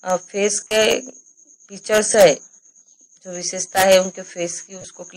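Lost LE Audio frames at 0.60–0.71 s (about 90 ms lost, longest gap around 40 ms), 2.13–2.15 s and 4.81–4.85 s: the decoder repeats the last spectrum with scrambled signs, so tones blur into noisy smears. Spectrograms show smeared, noisy patches; waveforms show fading, noise-like bursts.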